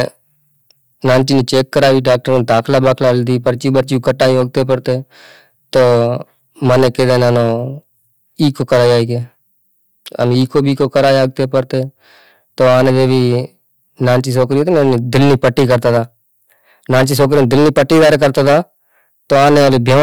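Hard clipping runs through the whole speech clip. Overdriven by 16 dB, about a tenth of samples hit the limit, flattening peaks into harsh fuzz.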